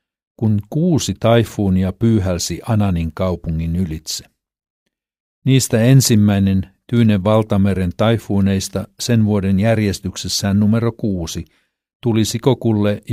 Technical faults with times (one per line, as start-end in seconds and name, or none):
none